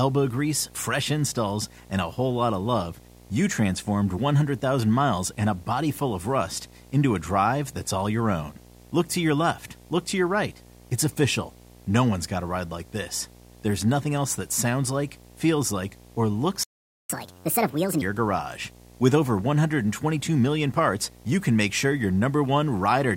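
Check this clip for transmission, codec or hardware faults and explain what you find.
Three faults are audible, one hardware and two in playback.

Video or display buzz, throughout: a screen or video cable couples into the audio, leaving a 60 Hz field-rate buzz with hash above it, about 25 dB below the speech.

Playback stall, 16.63 to 17.10 s: the speech cuts out mid-flow for about 0.46 s, likely because the player ran dry of data or its thread was blocked.

Catch-up at higher speed, 17.10 to 18.02 s: the player resamples its backlog at 1.5 times speed, so the speech rushes and rises roughly seven semitones before returning to normal.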